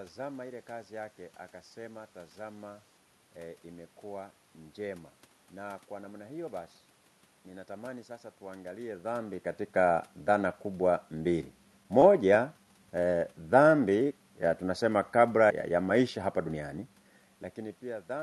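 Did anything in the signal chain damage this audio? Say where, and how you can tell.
Yes. A jitter buffer slow-down in the receive buffer from 13.63 to 14.06 s runs speech at 92% speed, adding 44 ms. Unlike clock drift, pitch stays unchanged because periods repeat.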